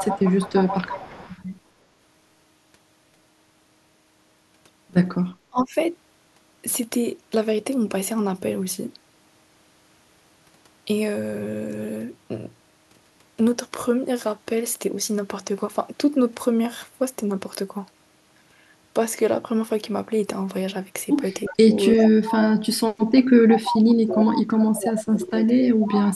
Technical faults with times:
0.00-1.38 echo leak
5.50-5.75 speech suppressed in double talk
21.45-22.57 echo leak
21.50-25.94 speech suppressed in double talk
23.66-24.34 echo leak
25.82-26.16 echo leak

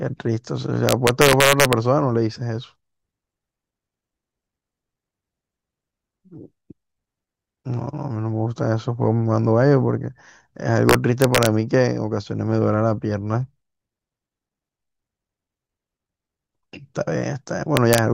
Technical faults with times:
0.89-1.73 integer overflow
10.89-11.46 integer overflow
17.77-17.98 integer overflow

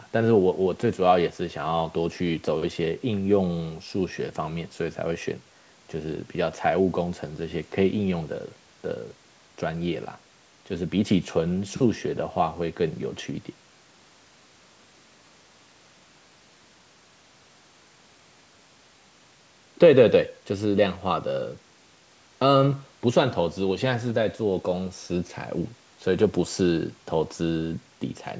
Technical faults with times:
none

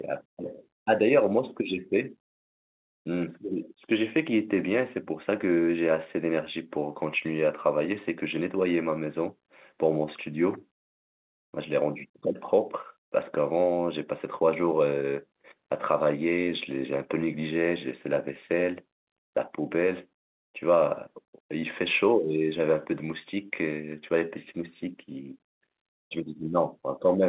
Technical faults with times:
none

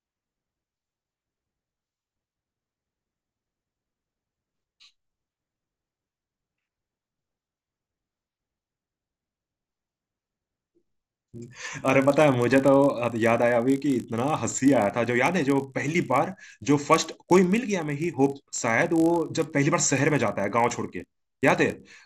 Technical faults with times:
0.00-22.05 resampler restarted on every block

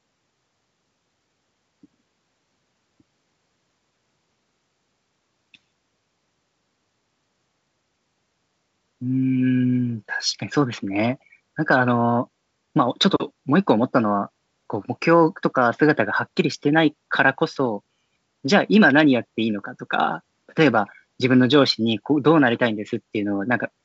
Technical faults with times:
none

